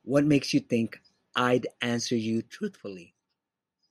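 A speech clip with zipper noise from 2.35 to 3.14 s, where the level falls by roughly 10 dB in unsmoothed steps about 40 times a second, each leaving a small click. The waveform envelope shows a staircase, and the spectrogram shows faint evenly spaced vertical lines.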